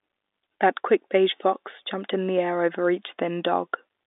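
There are no technical faults to describe in this speech clip at any point.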